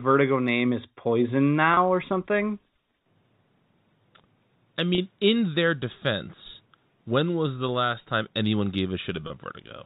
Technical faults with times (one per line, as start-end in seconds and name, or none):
1.74-1.77 packet loss with pitch repetition
4.95-4.98 packet loss with pitch repetition
9.27-9.30 packet loss with pitch repetition